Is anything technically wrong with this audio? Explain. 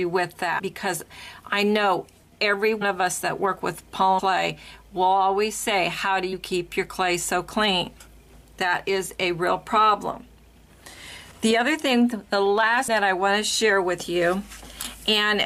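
Yes. At 0.58–0.60, 2.81–2.83, 4.18–4.20, 6.32 and 12.87 s the sound jumps forward. These are compressed frames skipped: whole frames were missing or rejected as damaged, dropping roughly a tenth to a third of a second each time.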